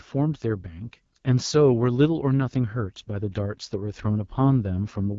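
From start to finish the speech carries AMR wideband (HD Voice) codec damage, plainly audible as a rough, raspy edge, which fits one of the codec's lowest bitrates, around 8.85 kbit/s. At so few bits the pulse excitation driving the vocal tract model is coarse, so the voice turns gritty. A spectrogram shows blurred, smeared harmonics below 6.4 kHz, a hazy noise-filled band above that, and nothing at all past 7.4 kHz.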